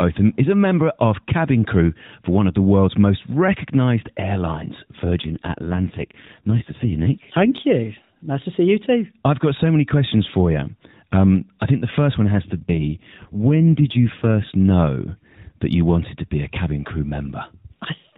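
Speech carried over an AMR narrowband mobile codec, with the band capped at 4 kHz and light coding damage that fits a 12.2 kbps mode. Two AMR rate drops occur: 5.22 to 7.50 s, right after "world's most recognised airlines", and 12.46 to 14.52 s, between "the first one has" and "know that you wanted". In both, the voice turns buzzier and more synthetic without any gap or band change, consistent with a fall to about 5.9 kbps, before recovering.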